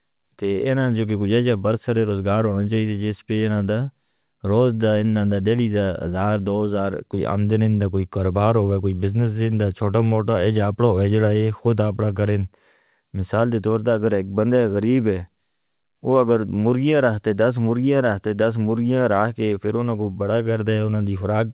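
No technical faults occur in this speech, which comes through a WebRTC call path with G.711 mu-law coding that leaves nothing above 4 kHz.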